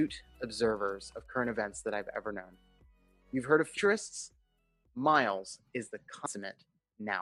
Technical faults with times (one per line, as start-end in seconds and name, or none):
3.76 compressed frames skipped
6.25 compressed frames skipped